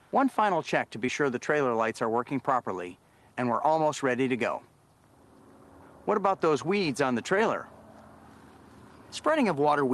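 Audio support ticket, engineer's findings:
Short concealed packet loss, 1.06–1.09 s: brief smear. Roughly 20 ms missing, 15 ms synthesised by decoder extrapolating prior signal, then crossfaded back. Spectrogram: blurred patch at the gap. Waveform: smooth patch at the seam. Opus call path, top band stops near 12 kHz.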